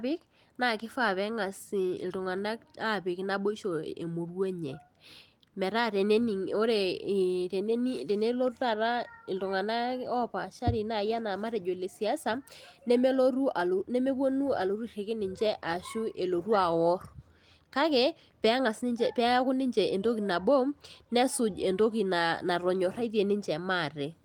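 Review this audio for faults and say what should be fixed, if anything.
Nothing needs fixing, since no faults can be heard in this speech recording. The Opus voice compression is working as expected, with content reaching up to about 20.2 kHz and only light coding traces, which fits a hybrid fullband setting at around 24 kbps.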